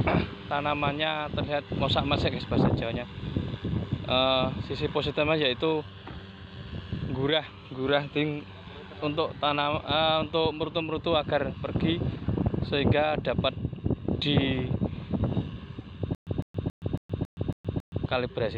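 From 16.15 s to 18.06 s, playback likely stalled and retried repeatedly. Each retry replayed the last fragment it had and then ran dry, producing a stutter with silent gaps. A burst of about 156 ms repeats seven times, each followed by roughly 120 ms of dead digital silence, giving an even cycle of about 275 ms. The result is a mechanical, locked-in repetition, and the audio that should have filled those two seconds never arrives.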